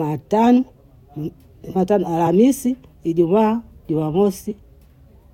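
At 2.26 s the speech jumps forward by around 40 ms. This is compressed frames skipped. Whole frames of the encoded stream never reach the output, either lost from the file or rejected by the decoder as damaged. The jump size points to about two frames. From 4.50 to 4.52 s it happens again, with a skip of about 20 ms, consistent with a single frame.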